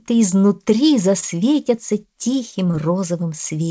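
At 1.20 s there is a short stall from a late packet, lasting until about 1.35 s. A packet arrived late and the jitter buffer ran dry. The receiver held the last sound for 24 ms, then resumed where it stopped. Nothing is lost, but the sound drags briefly, with a faint buzz or dip.

At 2.71 s comes a short concealed packet loss, ending by 2.75 s. About 20 ms of audio never reached the decoder. The receiver patched the gap by extending the preceding sound, then blended back. The result is a quick smear or wobble, through a band that stops at 8 kHz, which points to a G.722 call codec.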